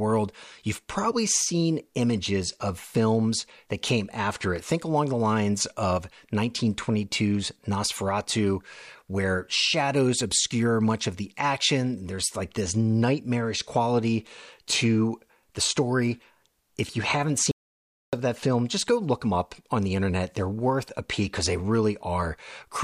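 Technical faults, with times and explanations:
17.51 to 18.13 s, audio dropout to silence: right after "you haven't" the speech cuts off mid-flow and about 0.62 s of silence follows before it resumes at "of that film just". The likely cause is an input briefly lost, with silence written in its place. Unlike a natural pause, no room tone or breath remains in the gap, and unlike a glitch that repeats or smears audio, nothing fills it.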